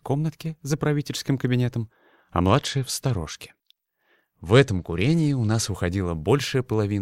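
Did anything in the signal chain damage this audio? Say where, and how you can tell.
Yes, at the codec stage: a Bluetooth SBC bit pool drop from 2.47 to 5.68 s. The top end goes dull and gritty noise creeps in, which fits the link squeezing SBC down to about 96 kbps, starving the upper sub-bands and coarsely quantising the rest.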